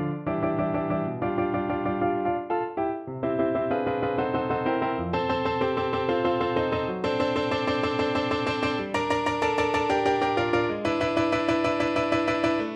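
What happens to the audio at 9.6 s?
Nothing goes wrong at 9.6 s; the audio runs through that moment intact, with no dropout, click or distortion.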